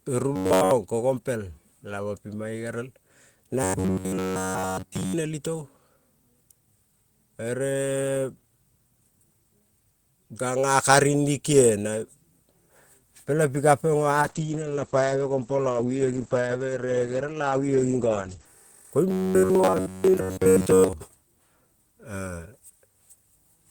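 From 0.36 to 0.71 s and again from 3.63 to 5.14 s, the speech turns into a rigid metallic buzz at about 94 Hz. That is robotic sound from repeated short buffers, likely caused by a single chunk of roughly 11 ms being looped in place of the audio that arrived too late.

Between 14.22 and 18.52 s a call bitrate drop takes the encoder from 32 to 12 kbps, holding the low rate for 4.24 s. Audio bandwidth narrows from 20 kHz to 8 kHz, leaving the speech muffled and coarse.

The same 94 Hz buzz returns from 19.09 to 20.93 s, now covering most of the interval rather than all of it.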